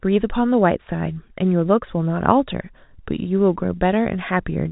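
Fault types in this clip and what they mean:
The speech runs over an ordinary G.711 mu-law telephone path, so nothing above about 3.8 kHz comes through, and no faults can be heard.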